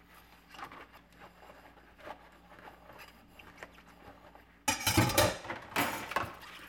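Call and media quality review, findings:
Damaged data in a compressed stream, 0.94 to 0.98 s: brief blip lasting about 30 ms. Probable component is the decoder input. Corrupt or lost bytes get misdecoded, and the decoder loses frame sync until it finds the next header. On a spectrogram this shows as a narrow smeared vertical streak. On the waveform it appears as an abrupt discontinuity against the surrounding signal.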